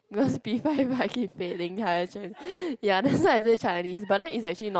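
At 2.43 to 2.47 s comes a short concealed packet loss: 20 ms of the speech arrived too late, and the decoder extended the preceding sound before blending back. It is heard as a quick smear. A spectrogram shows harmonics briefly frozen, and the waveform a short, oddly regular patch.

Overlapping its end, at 2.45 to 2.47 s, and again at 2.61 to 2.63 s, a lost packet was rebuilt from error correction. The following packet carried a coarse 20 ms copy, so nothing drops out, but those frames sound rougher and grainier. A spectrogram shows noisier, less defined harmonic bands rather than any gap.

From 2.49 to 2.63 s a burst of packet loss removes 120 ms. The receiver kept continuing the last sound and lowered its level, giving a held buzz or a fading hiss with no silence, and then the speech resumes further on. On a spectrogram this appears as flat, smeared stripes thinning out, and in the waveform as a decaying repeated cycle.

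Between 3.23 and 4.63 s, repeated packet loss (robotic sound) sets in. Eight separate holes add up to 260 ms, about a fifth of that stretch, and the longest lasts 60 ms. A further third of a second or so came back from error-correction copies. The result is choppy, with pieces missing. On a spectrogram it looks like a stuttering pattern of frozen slices, and in the waveform like jagged, uneven bursts. Throughout, the call path's content stops near 8 kHz, leaving the spectrogram empty above that line.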